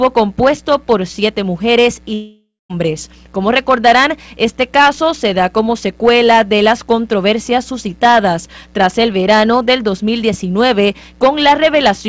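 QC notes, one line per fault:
2.14–2.71 s, long network dropout: sound stretches into a fading buzz, then 0.2 s of silence; 0.56 s likely lost in transit, never replayed.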